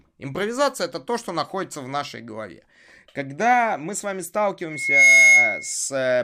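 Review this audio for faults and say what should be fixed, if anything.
A piercing single tone at 2.2 kHz swells up from 4.70 s, just after "мы с вами", reaching full strength in about a third of a second and riding roughly 15 dB above the speech until 5.75 s. This is loudspeaker feedback squeal: the microphone hears its own loudspeaker, and at 2.2 kHz the loop gain passes unity, so that frequency keeps growing on itself. To prevent it, lower the gain, move the microphone away from the loudspeaker, or notch out 2.2 kHz.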